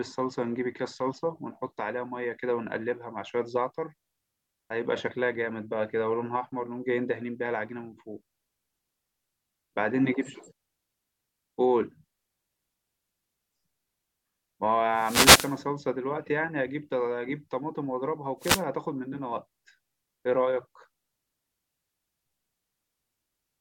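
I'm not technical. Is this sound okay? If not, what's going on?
No. This speech has two wireless microphone noise hits, at 14.92 to 15.61 s and at 18.39 to 18.64 s. Each is a short swish of static. A radio microphone's signal briefly weakened, probably as reflections cancelled it out, and the receiver's own hiss rose to fill the gap. A digital dropout would be a clean silence or glitch. Here the hiss swells and fades with the signal.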